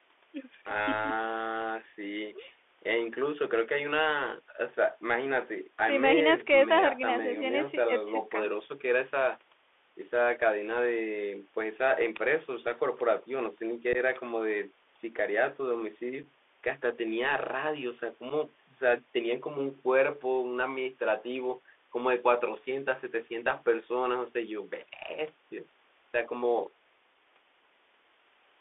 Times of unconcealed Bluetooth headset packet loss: 13.93-13.97, 16.23, 18.30

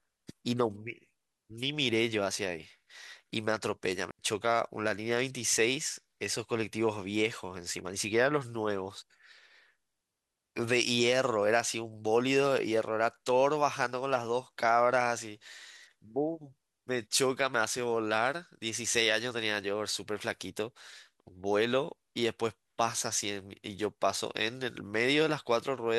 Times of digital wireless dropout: 4.11-4.19

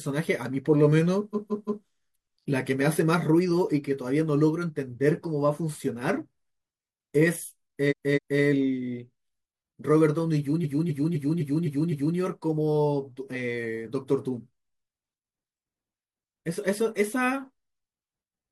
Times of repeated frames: 1.30-1.81, 7.87-8.38, 10.60-12.14

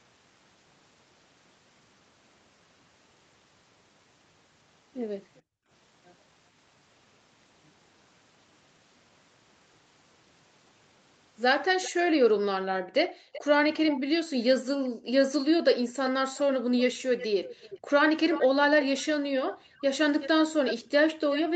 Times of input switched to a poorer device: none

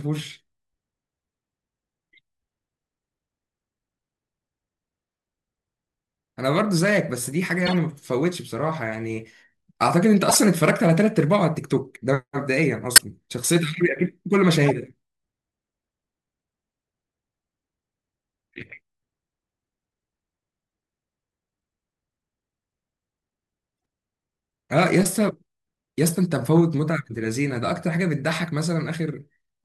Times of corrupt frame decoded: 7.65-7.75, 10.29-10.37, 12.96-13.01, 14.66-14.71

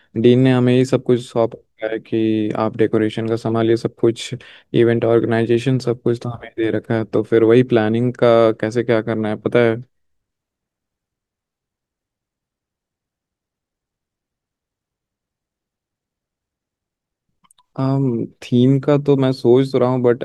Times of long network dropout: none

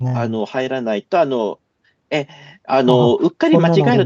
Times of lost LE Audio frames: none

